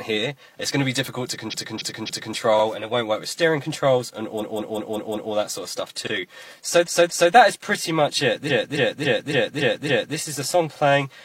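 Repeated frames occur at 1.49 to 2.33 s, 4.37 to 5.30 s, 6.83 to 7.29 s and 8.46 to 10.13 s. Each time, a run of compressed frames was delivered more than once, so the decoder plays the same stretch again. It sounds like a stutter: blocks of 278.6, 185.8, 232.2 and 278.6 ms repeat 3, 5, 2 and 6 extra times, adding 3.9 s in all. On a waveform or spectrogram, identical segments sit side by side, like tiles.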